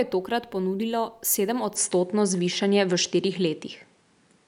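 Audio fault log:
1.76 to 4.48 s, input switched to a poorer device: From 1.76 s to the end, the speech turns duller and boxy with no gap at the change. Nothing reaches above 10.3 kHz afterwards. The level shifts by around 5 dB. A faint new background noise appears, sitting well below the speech. Together these point to a likely change of input to a narrower, noisier microphone, with its own tone and gain.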